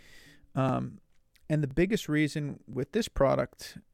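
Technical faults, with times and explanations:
0.69–0.71 s, 1.71–1.73 s (just after "and the") and 2.73–2.75 s: overlapping chunks. At each 1.0 s chunk boundary about 21 ms replays, giving a brief stutter-click. On a waveform this appears as a duplicated segment with a discontinuity; on a spectrogram, as thin vertical broadband lines.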